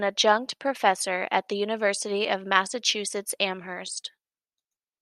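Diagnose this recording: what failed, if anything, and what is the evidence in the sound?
Nothing in the recording chain has failed, and the speech signal stays continuous and stable throughout with no audible defect at any stage.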